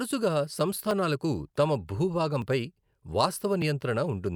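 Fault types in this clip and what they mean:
Dropped buffer (overrun): at 0.91, 2.42 and 3.62 s the speech jumps forward, each skip losing around 10 ms. The likely cause is samples overwritten by the hardware before the program read them, leaving the edges spliced together without any gap.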